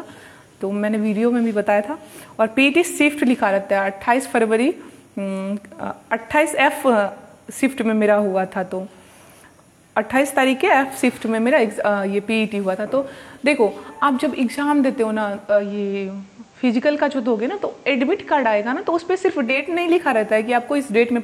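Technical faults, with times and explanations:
15.37–19.78 s: digital radio blending to analogue. Over about a third of a second the sound drops about 2 dB and picks up faint hiss roughly 40 dB down, as the receiver cross-fades from the lost digital stream to FM, then returns.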